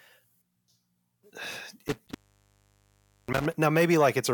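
From 1.87 s to 3.55 s the speech suffers an intermittent contact fault. A loose cable or plug breaks the signal path, then reconnects. Within that stretch the line is open for about 1.14 s in total, and the speech vanishes while it is. Crackle marks the edges where the contact breaks and makes again. During the open stretches a faint hiss remains.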